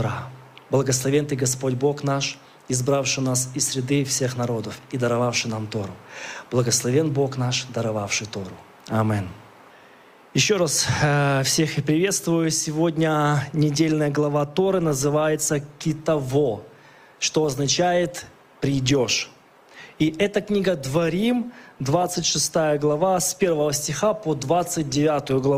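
From 14.66 s to the end, the audio quality drops abruptly, with stronger codec artefacts and no gap: an adaptive stream at a lower bitrate, consistent with Opus stepping down from about 64 to 24 kbit/s. Unlike packet loss, nothing drops out.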